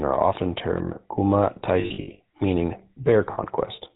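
Throughout, the speech passes through the GSM full-rate codec, which models the vocal tract with pulse excitation and cuts everything above 4 kHz, leaving a plainly buzzy, gravelly roughness consistent with 13 kbps coding. From 1.8 to 2.21 s, just after "are often termed kuma", lost GSM frames are concealed by repeating the last good frame. About 240 ms of the 400 ms stretch is lost, in runs of up to roughly 70 ms, each heard as a brief rough, metallic ring. A shorter loss at 3.32 to 3.39 s rings the same way for about 60 ms.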